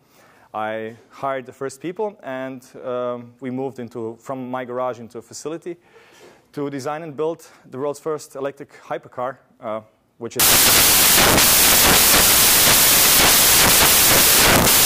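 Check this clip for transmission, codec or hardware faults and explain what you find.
Samples built from the wrong bytes from 10.4 s to the end: the reader assembles each sample's bytes wrongly, so each sample's rapidly changing low-order bits land in the high-order position. The result is loud, harsh broadband noise.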